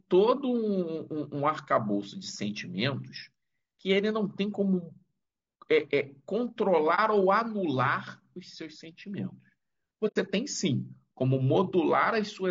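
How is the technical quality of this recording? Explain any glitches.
Technical quality is only fair; there's audible codec wear throughout plus two brief dropouts.

All the way through, the speech sounds rough and grainy with a thin, synthetic top end, likely from low-delay AAC compression at a low bitrate, around 32 kbps.

At 6.95–6.99 s and 10.07–10.16 s there's AAC frame loss with muting: the sound briefly dips for about 30 ms, then fades into a soft-edged hole of about 90 ms.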